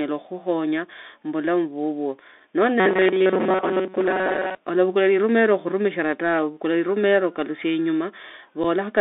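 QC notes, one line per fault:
Throughout: Bluetooth CVSD headset codec. The speech sits in a narrow telephone band of about 250 Hz to 3.6 kHz, with a granular hiss underneath and scratchy, gritty s sounds where loud high energy outruns the adaptive one-bit step. That pairing fits a 64 kbps CVSD headset link. It differs from plain band-limiting because of the slope-overload grit and the steady grain that tracks the signal rather than sitting as a flat noise floor.
2.8 to 4.55 s: robotic sound from repeated short buffers. For nearly two seconds the speech turns into a rigid metallic buzz pitched at 188 Hz while still roughly following the syllables. The likely cause is a stalled audio feed with the last slice of roughly 5 ms looped to fill the gap, which fits a buffer of about that length. Most of the real audio in this stretch is skipped. Unlike codec distortion, the fixed pitch ignores the speaker's intonation.
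8.64 s: unconcealed Bluetooth headset packet loss. A 7.5 ms hole, about a couple of headset packets, drops out with hard edges, and the speech resumes quieter for a moment as the CVSD step size rebuilds. Unlike the buzzing loop earlier, nothing is repeated here. The audio simply vanishes for an instant, which marks it as a lost packet rather than a buffering fault.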